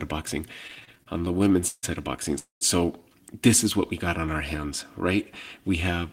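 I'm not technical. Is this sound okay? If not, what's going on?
No. There are two connection problems in this speech clip.

From 0.67 to 1.85 s, right after "of boxing", you hear repeated stalls (stutter). The sound keeps catching and dragging in many short hitches, the longest about 150 ms. Pieces of data arrived late, so the receiving phone ran dry again and again and stretched the last bit of sound to cover each wait. About a third of that stretch is filler. Nothing is lost, but it sounds jerky.

At 2.39 s, just after "side of boxing", there is a call audio freeze lasting until 2.63 s. The sound hangs for about a quarter of a second. It first smears on as a brief fading buzz, then goes silent for about 140 ms. The likely cause is data held up on the network, leaving the phone nothing new to play. Afterwards the speech picks up where it stopped, so nothing is missing, only delayed.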